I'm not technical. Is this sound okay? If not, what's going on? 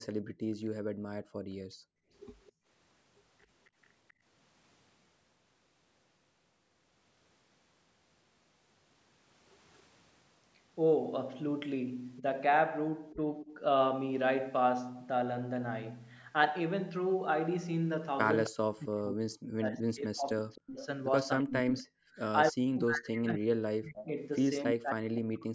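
No. Three call-related problems can be heard.

From 0.19 to 2.68 s the room sound keeps dropping away, sometimes almost to silence, for about a second and a half in total before it returns. This is background gated by the echo canceller: while the loudspeaker on this end was playing the other person, the call's echo-removal system turned this microphone down hard, and the room sound came back each time it let go.

A delayed repeat of the voice, arriving about a quarter of a second late, turns up at 0.65 to 0.69 s, 2.44 to 3.47 s, 18.44 to 18.49 s, 20.55 to 21.83 s and 23.97 to 24.74 s. It starts very quiet and varies in strength, and by 24 s it is nearly as loud as the voice itself. This is an echo leak. The likely cause is a speakerphone whose echo canceller didn't fully remove what its microphone picked up from its own loudspeaker, so part of that sound was sent back down the line.

At 12.21 to 13.51 s the voice dips slightly and briefly. 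From 18.49 s to the end at 25.54 s it is cut much harder, fading or vanishing in pieces for roughly four seconds in total. This is speech suppressed in double talk. The likely cause is both people talking at once, which left the echo canceller unable to tell this talker from the loudspeaker echo, so it turned everything down.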